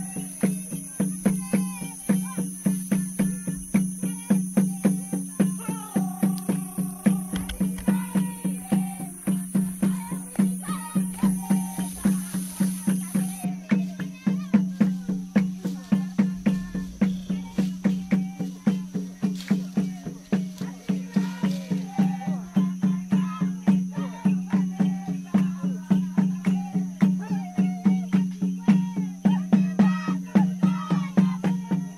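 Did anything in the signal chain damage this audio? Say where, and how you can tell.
No, nothing in the chain audibly damaged this audio, with no break, distortion, dropout or level fault anywhere in the signal.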